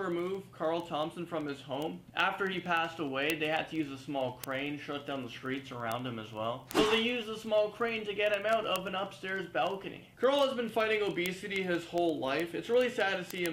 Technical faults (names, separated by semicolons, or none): word clock ticks